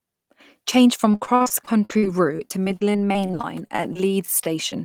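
From 1.11 to 4.74 s, repeated packet loss gives the speech a choppy, robotic sound. Around thirty brief dropouts, the longest 58 ms, are patched by stretching the preceding sound. About a fifth of the stretch is concealed, and some pieces simply vanish.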